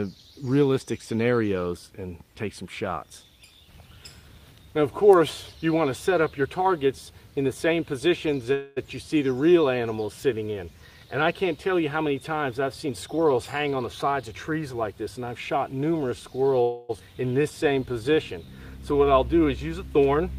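A call audio freeze at 8.53–8.78 s and again at 16.62–16.91 s holds the last sound as a fading buzz or hiss for about 0.23 s and 0.28 s, likely because delayed packets drained the jitter buffer; the audio then resumes where it stopped, with nothing lost, just later. A jitter buffer speed-up from 12.86 to 14.93 s plays the sound at 111% speed without a pitch change, shaving off about a fifth of a second in tiny pitch-period cuts so it sounds hurried. At 16.99–17.02 s a skip ahead jumps past roughly 200 ms of audio, joining the two sides almost directly, which takes back most of the delay the second freeze added. Two jitter buffer slow-downs follow, 17.42–18.47 s at 92% speed, adding 86 ms, and 18.93–19.46 s at 89%, adding 67 ms, where repeated pitch periods stretch the sound at unchanged pitch, drawing it out as the buffer rebuilds its reserve.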